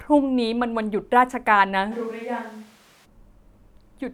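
A switch to a distant microphone runs from 1.93 s to 3.04 s. The speech abruptly turns roomy and hollow, with thinner low end, a level drop of roughly 5 dB, and background noise rising to around 25 dB below the speech. The sudden change at both edges points to the close microphone's signal dropping out, with the likely cause being a fallback to a farther pickup, such as a camera's built-in microphone, before the close source returns.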